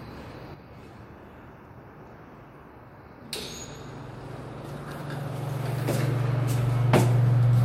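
At 0.54 s the level takes a sudden step down of about 6 dB and stays there to the end of the clip. Anything that sat in the middle of the image keeps going but quieter. That pattern is the classic signature of one channel dropping out. The likely cause is one side of the stereo pair going dead, so the mono sum is left carrying only half the signal.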